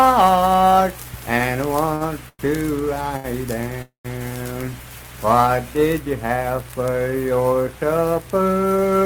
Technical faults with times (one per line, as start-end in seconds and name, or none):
1.95-2.03 short stall from a late packet
2.29-2.41 call audio freeze
3.16-3.26 short stall from a late packet
3.82-4.07 call audio freeze